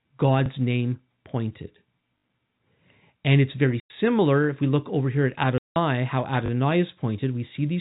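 Speech carried over a G.711 telephone path, band-limited below 4 kHz, suffers repeated buffers when audio arrived late and the device replayed the last 20 ms chunk, giving hard-edged stutters at 0.46–0.48 s, 2.18–2.24 s (three extra repeats), 4.44–4.46 s and 6.46–6.50 s. Packet loss filled with silence leaves hard-edged holes, consistent with dropped 20 ms packets: 100 ms at 3.8–3.9 s after "it's very" and 180 ms at 5.58–5.76 s after "look over here at".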